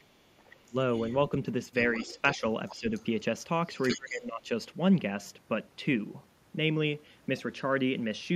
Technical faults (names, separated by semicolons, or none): other side's voice leaking through; speech suppressed in double talk